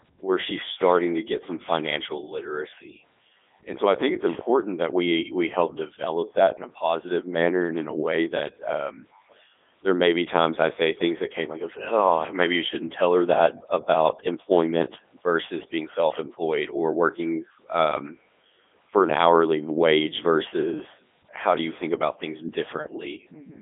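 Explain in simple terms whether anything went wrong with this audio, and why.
Throughout the whole clip the speech sounds robotic and buzzy, like a synthetic voice rather than a real one, and it is thin, with nothing above about 3.8 kHz. This is the Codec 2 vocoder at work, and the damage is heavy. Instead of keeping the actual sound wave, it keeps only a rough outline of pitch, loudness and tone, then rebuilds the voice from simple tones, which is why it sounds machine-made.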